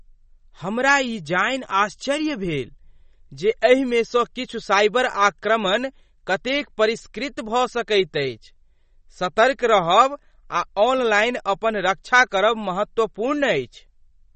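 Throughout, likely MP3 compression near 32 kbps: nothing above 8.4 kHz, and unlike simple low-pass filtering, weak detail flickers with a watery swirl.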